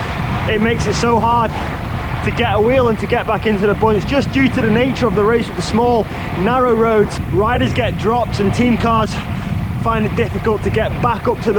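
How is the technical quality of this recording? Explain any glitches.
The technical quality is compromised throughout. There is low bit depth without dither across the whole clip. The sound is grainy, and the grit tracks the signal. Quiet passages sputter or fall silent. Likely cause: truncation to about 8 bits with no dither, leaving error around 35 dB below the signal.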